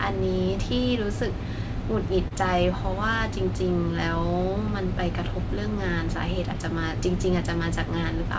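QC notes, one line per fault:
2.28–2.33 s and 6.53–6.56 s, short concealed packet loss: About 20 ms of the call's speech arrived too late to decode each time. The receiver covered each gap by extending the preceding sound, pitched if voiced and noise-like if not, then faded back into real audio. That repair is heard as a brief smear or wobble, and a short consonant can drop out. The surrounding band stops at 8 kHz, consistent with a G.722 call path.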